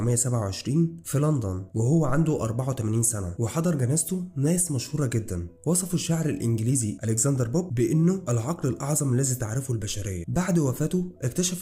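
No technical faults are audible.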